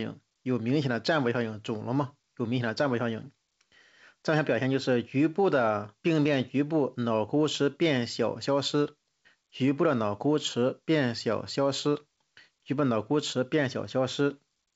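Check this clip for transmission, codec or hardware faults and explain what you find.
No faults found in the speech; the band stops at 8 kHz, consistent with a wideband call codec such as G.722 on a WebRTC path.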